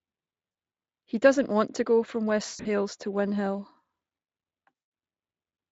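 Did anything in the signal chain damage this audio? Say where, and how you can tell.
Yes, at the network stage: VoIP packet loss concealed by the speech codec at 0.51–0.55 s, 2.45–2.67 s after "want to go from", and 4.81 s, where the Speex decoder extrapolates into buzzy, fading sound.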